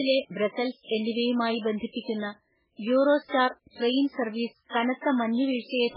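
Speech, with heavy MP3 compression across the whole clip. Nothing survives above 5.2 kHz, and the remaining band sounds watery and swirly, with metallic chirps on s sounds and smeared consonant onsets. This is likely the result of an encoder starved of bits, consistent with a very low bitrate around 8 kbps. On a spectrogram the treble ends in a flat ceiling, and the content below shows patchy holes that flicker on and off between frames.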